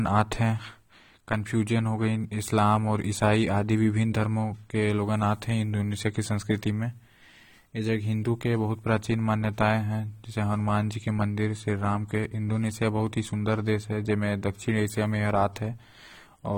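Throughout the speech, the sound is dull and smeared, with a warbling, fizzy texture on sibilants. Nothing is heard above 19.3 kHz. This is likely AAC compression, AAC-LC quantising its frequency lines coarsely, which fits a low bitrate near 32 kbps.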